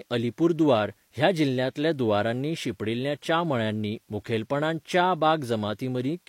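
From start to end, the speech carries low bit depth with dither. The hiss sits roughly 40 dB below the speech, which fits about 10-bit samples. Dither turns the rounding error into steady white noise. It sounds like a constant, even hiss, without distortion.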